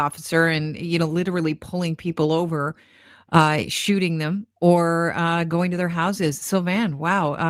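No audible faults in this speech.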